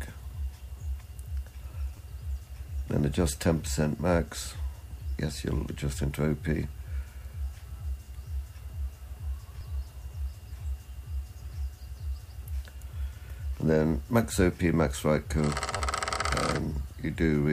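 At 1.97 s and again at 15.77 s, a repeated buffer sounds as a brief buzzy click. A 10 ms block replays twice, then three times, when fresh audio arrives late. Unlike a dropout, no silence or missing sound follows, only hard-joined repeats.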